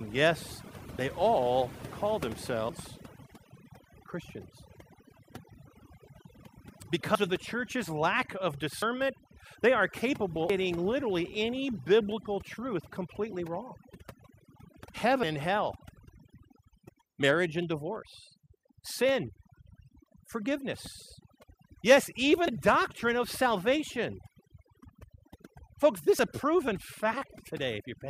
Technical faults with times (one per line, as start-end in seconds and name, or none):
0.00-28.09 overdone noise removal
2.69 dropped buffer (overrun)
7.15 dropped buffer (overrun)
8.82 dropped buffer (overrun)
10.50 dropped buffer (overrun)
15.23 dropped buffer (overrun)
20.06 dropped buffer (overrun)
22.48 dropped buffer (overrun)
26.19 dropped buffer (overrun)